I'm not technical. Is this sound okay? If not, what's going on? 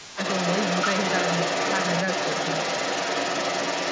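No. For roughly the first 0.2 seconds, from 0 to 0.18 s, the talker's voice drops sharply. This is speech suppressed in double talk: both sides likely spoke at once, and the call's echo canceller turned everything down.

A second voice can be heard throughout, about as loud as the talker. This is the other side's voice leaking through, likely because the talker's loudspeaker played the far end and the echo canceller failed to remove it from the microphone.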